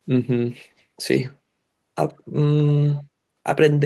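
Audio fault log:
0.78–0.83 s, 2.08–2.13 s, 2.88–3.03 s: echo leak. The far end's echo canceller likely let through part of what its microphone picked up from the loudspeaker, returning a faint copy of the speech 128 ms late. The copy is very quiet at first and somewhat stronger in the last, longer scrap.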